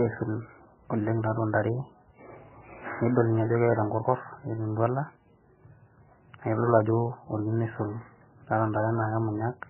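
Throughout, heavy damage from likely MP3 compression: nothing above 3 kHz, with watery, swirling speech and smeared consonants, which fits a starved bitrate near 9 kbps.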